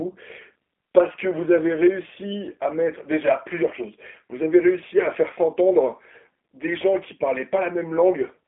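From start to finish the speech carries G.729 codec damage, plainly audible. The sound is rebuilt from a vocal tract filter, a pitch predictor and a few pulses per 10 ms frame, so it comes out rough and slightly synthetic, which fits an 8 kbit/s G.729A coder. The line band runs from 250 Hz to 3.4 kHz. A spectrogram shows a hard ceiling near 3.5 kHz with nothing above it, and thin, smeared harmonics below.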